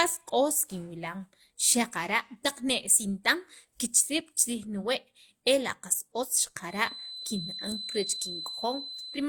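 Transcoding between lossy codecs runs through the whole speech clip. The sound carries two different kinds of coding damage at once, which is likely the result of passing through one lossy codec and then being re-encoded by a second. The later encoder spends part of its budget reproducing the first codec's artefacts and adds its own on top, so both layers are heard together. The character of the artefacts points to a low-rate HE-AAC stage followed by Opus at a modest bitrate. Nothing is present above 20.1 kHz, the lowest cut-off in the chain.

A feedback whistle starts at 6.64 s and continues to the end of the clip. A thin, steady tone at 4 kHz sits behind the speech, around 10 dB below it, and swells and fades slowly in level. The likely cause is a loudspeaker-to-microphone loop held right at the edge of feedback. At that point one frequency keeps ringing without building up into a full howl.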